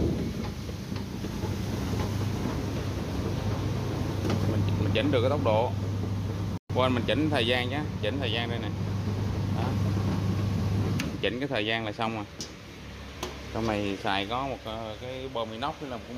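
A playback stall, most likely the player running short of buffered data or having its output thread briefly blocked, interrupts the audio at 6.58 s. Output drops to silence for 120 ms, until 6.70 s, cutting the sound off mid-flow rather than at a natural pause. When the player recovers, the sound resumes, but the gap reads as an abrupt hole in the stream.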